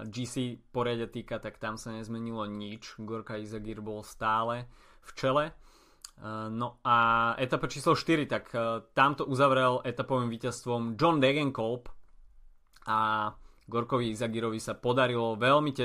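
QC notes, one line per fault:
No faults found on the speech clip; nothing to log.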